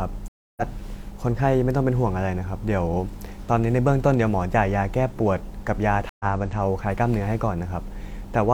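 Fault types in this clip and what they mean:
Stream reconnect: the speech cuts to silence twice, for 285 ms at 0.28 s and 103 ms at 6.09 s, then resumes slightly ahead, skipping roughly 0.2 s and 0.1 s, because the connection dropped and a fresh decoder rejoined the stream mid-flow.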